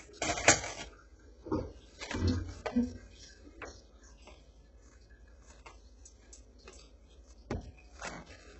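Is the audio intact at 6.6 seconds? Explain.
No. At 6.6 seconds the clip shows the same damage it carries throughout, most likely HE-AAC compression at a very low rate (the heavy damage points to around 8 kbps). Only the lower band is properly coded; the treble is copied up from below by spectral band replication, so its harmonics fail to line up and bright detail turns gritty and metallic. A spectrogram shows smeared, repeated-looking upper bands and nothing at all above 8 kHz.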